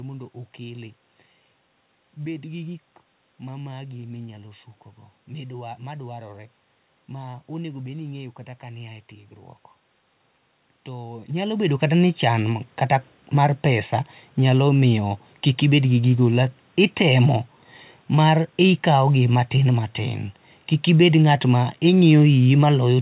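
No technical faults are audible.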